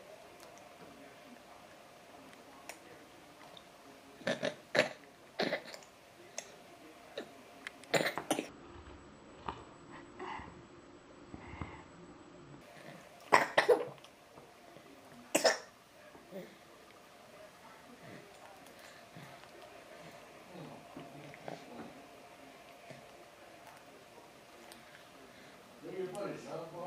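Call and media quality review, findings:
Stereo read as mono, 8.49 to 12.61 s. Half speed, an octave low. Interleaved left/right samples likely decoded as one channel in the playback or decode path.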